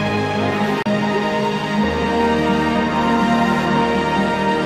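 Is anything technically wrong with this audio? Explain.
Yes. From 0.83 to 0.87 s there is damaged data in a compressed stream. Corrupted bytes leave the decoder unable to parse those frames, so it loses sync and hunts for the next valid frame header. The result is a brief glitch about 40 ms long.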